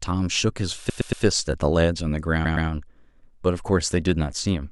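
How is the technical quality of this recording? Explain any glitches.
The speech stutters twice: from 0.88 to 1.23 s a 116 ms slice replays three extra times, and from 2.44 to 2.67 s twice more. These are repeated frames, a block of compressed audio, likely five frames, sent or stored again, stretching the clip by 348 and 232 ms.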